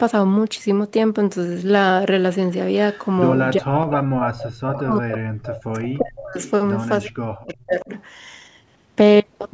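Echo leak at 2.92–3.07, 3.90–3.94, 4.46–4.81, 6.44–6.52 and 7.39–8.00 s puts a faint delayed copy of the speech, trailing by 361 ms and sitting about 15 to 25 dB below it, into this speech recording. The likely cause is a far-end loudspeaker whose echo canceller let part of its microphone pickup return. Speech suppressed in double talk at 3.56–6.38 and 7.04–7.89 s makes the talker dip by as much as about 40 dB, likely because the canceller, unable to tell local speech from echo while both sides talked, turned everything down.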